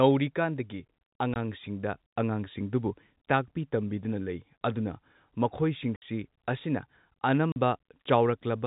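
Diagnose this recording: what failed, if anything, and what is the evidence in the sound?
Network packet loss filled with silence. Hard-edged silent gaps at 1.34–1.36, 5.96–6.02 and 7.52–7.56 s. Their 20 ms steps point to dropped 20 ms packets.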